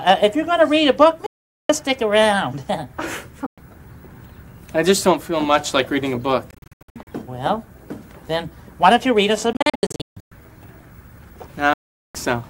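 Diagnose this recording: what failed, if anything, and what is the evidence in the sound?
Playback link, likely a Bluetooth dropout: packets missed the headphones, leaving abrupt silences at 1.26–1.70, 3.46–3.58, 6.51–7.07 (choppy), 9.53–10.32 (choppy) and 11.73–12.15 s, with the sound resuming further on, as if it had kept playing.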